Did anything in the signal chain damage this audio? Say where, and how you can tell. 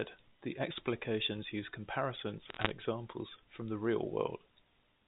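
Yes. Between 2.49 and 2.71 s a burst of sharp ticks and crackle sits over otherwise unchanged speech. That is bit errors on a digital phone line in transmission: flipped bits in the mu-law G.711 stream each corrupt one sample, at a rate of about 0.7 percent.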